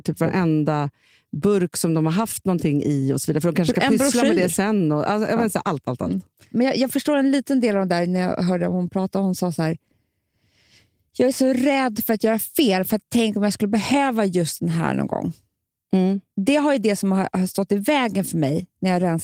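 No technical faults can be heard anywhere in this speech. The Opus voice compression leaves only a light mark, coding the full band in its hybrid mode at 20 kbps.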